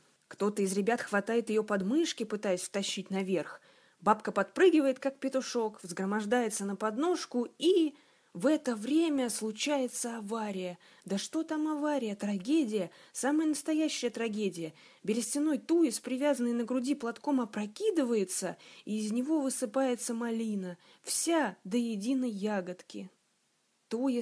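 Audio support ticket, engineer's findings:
No audible technical faults found; signal level, continuity and bandwidth hold steady across the whole recording, and no component issue is indicated.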